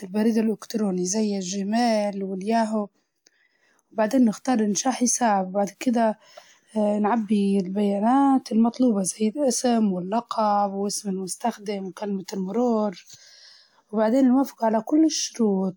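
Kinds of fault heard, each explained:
No kinds of fault are heard in this clip.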